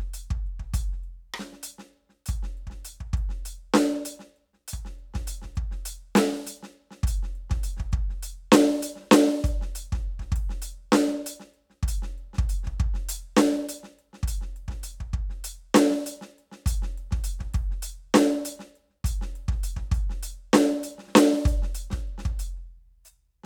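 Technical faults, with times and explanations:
Listening through the music, nothing stood out as a technical problem.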